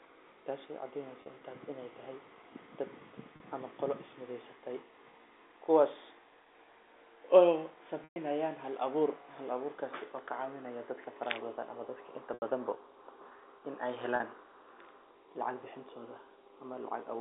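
Speech with packet loss with pitch repetition at 1.22, 3.36, 8.04, 12.34 (after "dadka inta") and 14.16 s (after "in ey"): lost packets were bridged by repeating the last pitch period, so the 40 ms gaps sound like a briefly held buzzy tone, while the 80 and 120 ms gaps fade toward silence before speech returns. USB whine from 8.52 to 11.89 s, ending just before "dadka inta bada": current drawn in 1 ms bus frames leaks into the audio as a fixed-pitch 1 kHz tone whose strongest harmonic sits at 9 kHz, about 35 dB below the speech.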